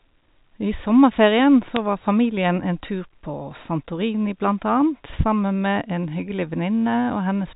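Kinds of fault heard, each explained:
Bit errors on a digital phone line: At about 1.76 s a brief burst of bit errors hits the speech. That's what you get when bits flip on a G.711 line. Each bad bit corrupts one sample, and a hit on the sign or a high-order bit throws that sample far off, so you hear a click. Here it's one isolated event, pointing to a couple of damaged frames and a very low error rate, around one bit in two thousand. The band-limited telephone sound around it carries on unchanged.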